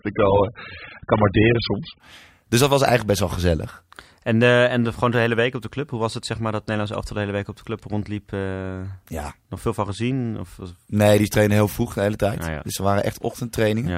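From 0 to 2.0 s the speech carries nothing above 5 kHz and has stronger codec artefacts, with a thin, smeared top end, the signature of an adaptive stream starting at a low bitrate. The player opened on a low-quality rendition, which sounds consistent with roughly 8 kbit/s AAC, to begin quickly. At 2.0 s it switches to a much higher rendition, around 96 kbit/s, and the treble returns abruptly with no gap.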